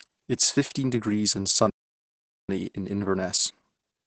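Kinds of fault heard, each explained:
Opus voice compression: throughout, Opus at 10 kbps in SILK mode caps the band at 8 kHz and coarsely codes the excitation, leaving speech muffled, hoarse and slightly robotic.
Playback stall: from 1.70 to 2.49 s, just after "is fifteen degrees and", the sound drops to silence for 0.79 s, likely because the player ran out of data.
Time-compressed catch-up: from 2.49 s to the end, the player trims and cross-fades small pieces to clear its backlog, running 1.1 times fast at normal pitch.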